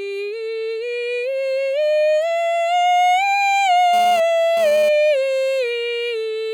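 From 3.93 to 4.89 s the music picks up a GSM phone buzz, a hard, raspy tone repeating about 217 times a second and sitting about 16 dB below the music. A nearby 2G handset sent a short data burst, and the audio circuitry rectified its radio pulses. Unlike mains hum at 50 or 60 Hz, it is harsher and packed with harmonics, and it switches abruptly on and off instead of droning steadily.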